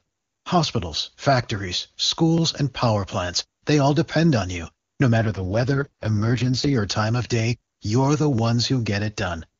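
From 5.18 to 6.76 s, an AMR rate drop turns the speech rough and synthetic. The spectrogram keeps its band, and the waveform shows no gap.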